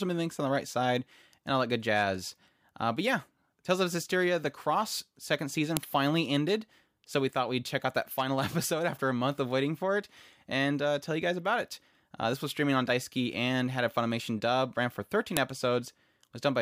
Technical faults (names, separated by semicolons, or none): file header played as audio